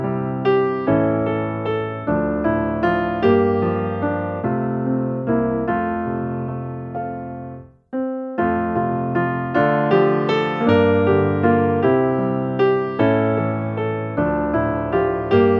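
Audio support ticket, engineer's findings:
No faults found on listening. Nothing in the audio points to a problem needing action on this ticket.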